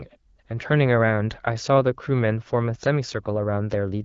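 No technical faults can be heard in the speech; it carries the band limit of AMR wideband (HD Voice) coding at 12.65 kbit/s, with nothing above about 7.5 kHz.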